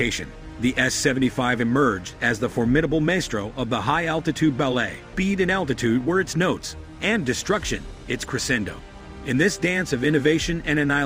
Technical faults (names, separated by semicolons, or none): skip ahead; jitter buffer speed-up